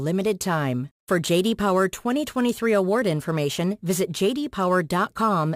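Throughout, crude rate conversion leaves a gritty, inharmonic fizz riding on louder and brighter syllables, roughly 25 dB below the speech. Samples were repeated rather than filtered, which fits a 44.1 kHz to 48 kHz change. A spectrogram shows faint mirrored, non-harmonic lines among the voice harmonics.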